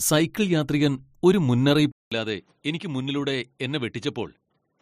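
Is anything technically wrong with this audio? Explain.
Yes. At 1.92 s the input was likely switched to a poorer device with a narrower band. After a 200 ms gap, the speech turns duller, with nothing above 11.4 kHz, drops roughly 10 dB, and carries new background noise around 40 dB down until the end.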